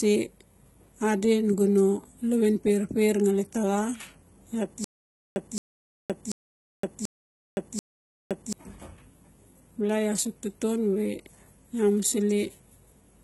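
Throughout, the speech carries heavy HE-AAC compression, likely at a very low bitrate near 16 kbps. Sibilants sound gritty and metallic, and nothing reaches above 11.8 kHz. Unlike a plain low-pass, the treble is present but rebuilt.

From 4.84 to 8.53 s, a stutter with silent gaps repeats one 0.22 s fragment five times, each followed by 0.52 s of digital silence, likely from a stalled stream. The even 0.74 s rhythm sets it apart from random dropouts.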